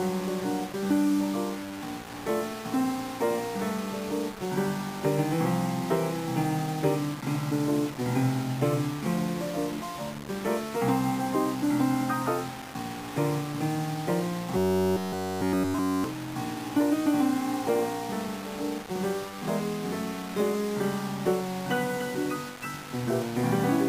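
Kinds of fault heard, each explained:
Low bit depth without dither: Grainy distortion runs through the whole clip, with a rounding error roughly 15 dB below the signal. It likely comes from quantising to only about 5 bits without dither. Unlike steady background hiss, the grit rises and falls with the sound itself.
Robotic sound from repeated short buffers: From 14.57 to 16.04 s, essentially the whole stretch becomes a rigid metallic buzz at 93.8 Hz. This likely comes from a chunk of about 10.7 ms being repeated while new audio is skipped. Its fixed rate ignores the original pitch, which sets it apart from pitch-shifting.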